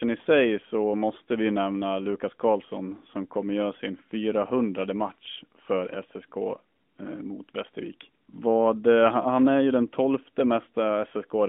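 No technical faults heard.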